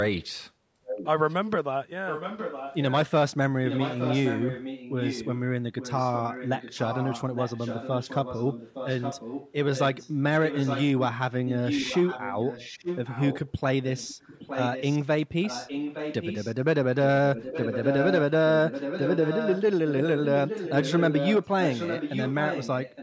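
A faint copy of the speech trails it by 864 ms from 0.85 to 1.35 s, 2.07 to 3.11 s and 3.65 to 10.87 s, then grows louder from 11.46 s to the end. This is echo leak, likely from a loudspeaker on the far side whose echo canceller let the pickup return.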